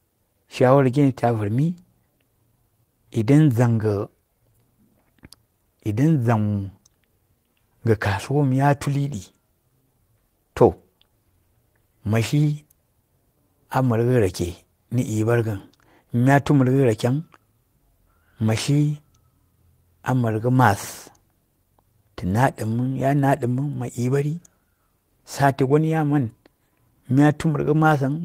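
Nothing technically wrong turns up anywhere in this speech recording, so there are no times or causes to point to.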